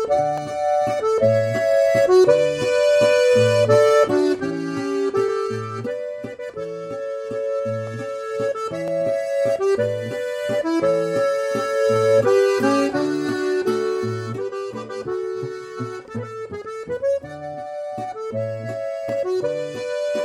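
Four isolated sharp clicks cut through the sound at 0.38, 7.87, 8.88 and 19.09 s, each a single thin vertical line across the spectrum. They are likely dropped samples: well under a millisecond of the stream goes missing, so the waveform leaps straight to a later value. Unlike a dropout, no audible gap or hole in the sound accompanies them. The only trace is the instantaneous click from that discontinuity.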